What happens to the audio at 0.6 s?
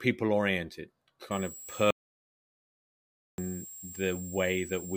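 Nothing goes wrong at 0.6 s; the speech there is intact, with no dropout, click or distortion.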